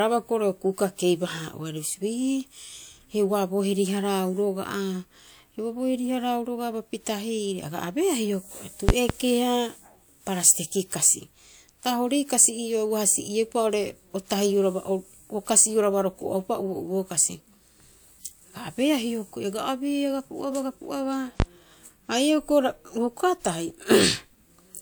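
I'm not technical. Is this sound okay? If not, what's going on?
No. There are two loud pops. From 8.89 to 9.13 s, two sharp pops land close together. A single pop follows from 21.40 to 21.44 s. Both are much louder than the speech, which carries on underneath. The likely cause is a sudden electrical jolt, from a plug, switch or static.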